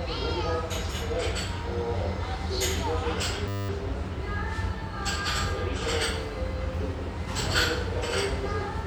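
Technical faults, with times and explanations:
3.48–3.69 s, system hang loop: the system froze while the sound hardware kept replaying one 10 ms slice of its ring buffer 21 times, heard as a steady 100 Hz buzz, with essentially no audio lost. On a spectrogram this shows as evenly spaced harmonic lines 100 Hz apart, and the waveform repeats one identical cycle.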